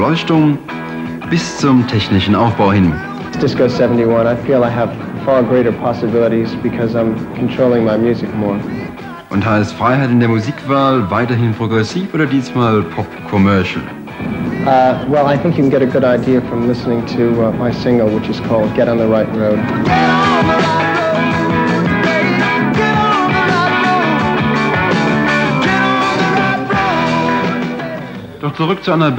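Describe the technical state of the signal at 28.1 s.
At 28.1 s the signal is intact, with no dropout, distortion, glitch or other transmission fault to be heard.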